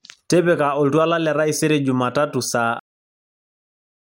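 At 2.79 s the speech has a cut-off end: playback stops mid-sound and drops straight to digital silence, with no natural decay or fade distinguishing it.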